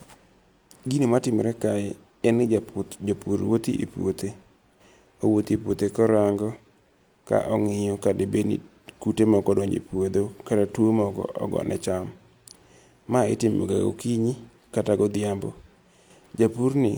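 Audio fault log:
Nothing to log here, as this speech recording comes through without a single problem worth noting.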